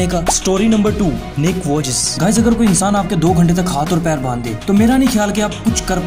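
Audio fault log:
No faults heard anywhere in this recording.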